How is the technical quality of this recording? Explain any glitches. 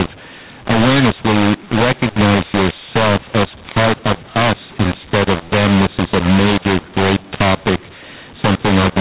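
The quality is poor: the telephone speech is harsh and distorted from start to finish, and on a spectrogram nothing appears above 4 kHz, consistent with 8 kHz G.711 A-law coding. Throughout, mu-law and A-law are mixed up: audio written as A-law is read as mu-law, which scrambles levels, lifting quiet samples so pauses fill with noise. The waveform looks jagged, and the spectrogram shows broadband haze.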